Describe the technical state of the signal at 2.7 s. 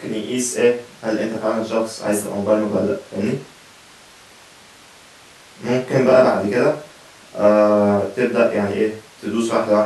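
At 2.7 s the speech signal is intact, with no audible technical fault at that point.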